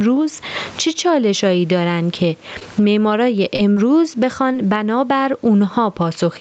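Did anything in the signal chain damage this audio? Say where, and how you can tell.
Yes. Gain pumping runs through the whole clip: the gain swings by roughly 20 dB, likely input gain set too high feeding a fast limiter.

Scattered short gaps appear between 2.59 and 4.66 s, a network fault: about four lost packets, the longest near 30 ms, each patched by extending the preceding sound.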